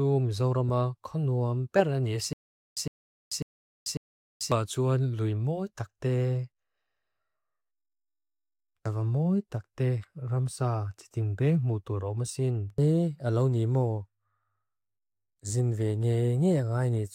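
From 2.33 s to 4.52 s the speech catches in a stutter with silent gaps: a burst of about 109 ms plays, drops into dead digital silence for about 438 ms, then the same burst returns, four times in all, on an even cycle of roughly 547 ms. The likely cause is a stalled player or stream replaying its last buffered fragment on each retry and then running empty, so the speech that belonged in those gaps never arrives.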